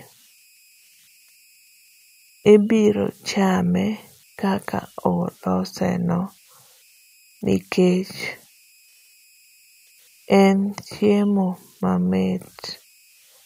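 Converter idle tones run through the whole speech recording. The delta-sigma converter appears to have been working without dither, so at low input levels it settles into repeating bit patterns that produce a faint whistle around 3 kHz, sitting about 35 dB below the signal. The whistle shows in the pauses, with a grainy texture beneath the quieter passages. On a spectrogram it appears as a thin horizontal line near 3 kHz, most visible in the gaps between phrases.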